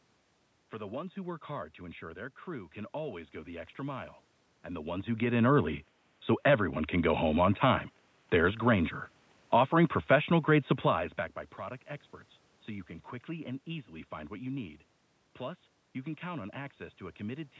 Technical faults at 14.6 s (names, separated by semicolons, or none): none